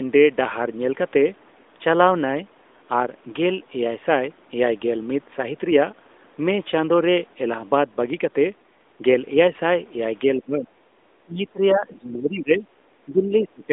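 From 10.25 to 10.77 s, 11.19 to 12.66 s and 13.05 to 13.72 s the speech sinks by as much as about 25 dB and then about 20 dB, thinning and breaking into fragments. This is likely speech suppressed in double talk: the echo canceller mistook overlapping speech for echo and attenuated it. Unlike packet-loss dropouts, the level ducks and recovers rather than cutting to silence, heard through the narrowband AMR mobile codec's band.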